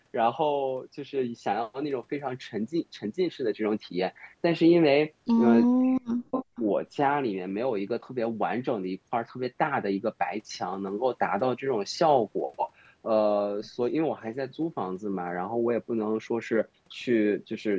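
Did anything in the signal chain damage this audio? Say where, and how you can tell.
Yes. Between 5.66 and 6.44 s the speech is suppressed in double talk, most likely by the call's echo canceller, which couldn't separate the near talker from the loudspeaker echo and attenuated everything. The sound dips and breaks apart for roughly 0.7 s in total, falling by something like 40 dB at its deepest. On the waveform the envelope collapses in chunks, and on the spectrogram the harmonics fade or vanish in patches rather than tapering naturally.

There is also an echo leak from 6.33 to 6.61 s, likely where a loudspeaker endpoint's canceller let some of its microphone pickup through and sent it back. It sounds like a delayed copy of the speech, trailing the original by 384 ms at about 10 dB below it. A spectrogram shows a fainter replica of the speech's harmonic pattern shifted right by that delay, and it overlaps the tail of the suppressed stretch. 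The microphone processing's band limit at 8 kHz is the normal call bandwidth, not damage.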